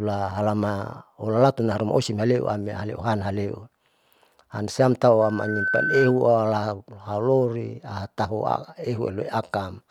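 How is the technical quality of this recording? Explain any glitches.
The recording has one clear fault, a burst of loudspeaker feedback squeal. From 5.22 to 6.21 s, a piercing 1.5 kHz tone swells over roughly 0.4 s until it sits about 5 dB above the speech. It happens because the microphone re-amplifies its own loudspeaker.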